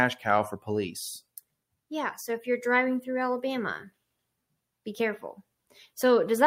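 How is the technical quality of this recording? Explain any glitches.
No technical glitches can be heard in this speech recording. There is nothing here to explain, as no fault turns up at any point.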